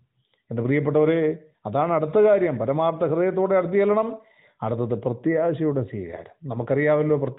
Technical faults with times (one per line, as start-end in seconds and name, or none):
none